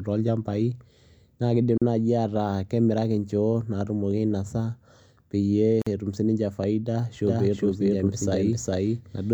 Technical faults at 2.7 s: none

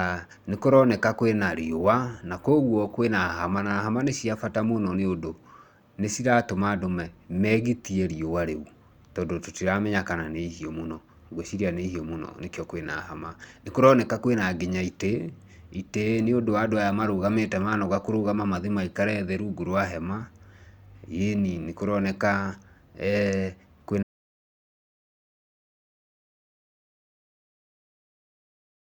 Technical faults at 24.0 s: stream segment skipped

